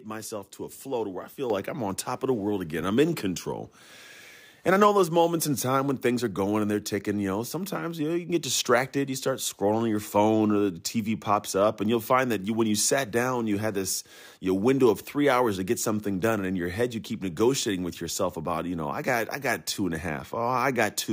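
Microphone volume stepped up at 1.5 s: the call software judged the microphone input too quiet and raised the device's input volume in a single step of about 7 dB. Because the change happens at the capture stage, the speech and the background noise behind it jump up together at that instant. The level shift is abrupt rather than a smooth ramp, so the speech is suddenly louder.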